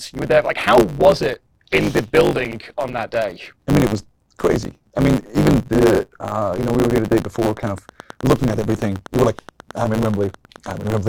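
From the start, the speech carries a block size mismatch (truncated). One stage writes longer blocks than the next reads, which fits a 512-sample written block, so each block's tail is discarded. The result is a steady 100 Hz buzz, with the speech running 1.16 times fast at about normal pitch.

From 7.25 s to 10.98 s a train of clicks rides over the sound, including the pauses. There are about 40 similar clicks at a regular 8.1 per second, peaking a few dB above the speech, likely from interference from nearby equipment.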